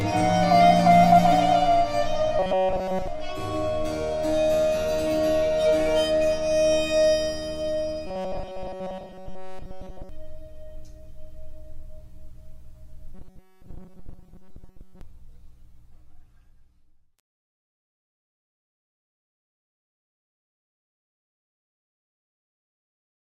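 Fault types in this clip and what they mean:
Channel delay (comb filtering): one channel arrives roughly 10 ms late before mono summing, cutting notches from about 50 Hz upward, so the whole clip sounds hollow and phasey.
Robotic sound from repeated short buffers: likely caused by short buffers repeating while fresh audio is skipped, producing a rigid, metallic 188 Hz buzz, which fits a buffer of about 5.3 ms.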